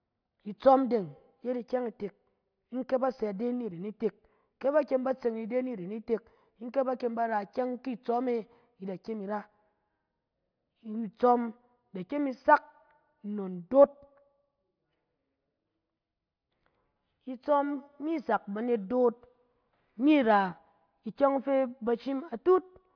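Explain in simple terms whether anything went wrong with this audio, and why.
Nothing went wrong with this audio, because no fault can be heard anywhere in the recording.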